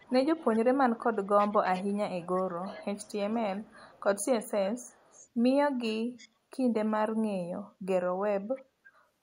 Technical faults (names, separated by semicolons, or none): echo leak